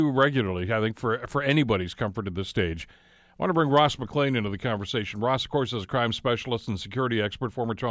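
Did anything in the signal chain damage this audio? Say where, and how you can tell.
No, nothing in this recording stood out on listening as damage from any stage of the signal chain.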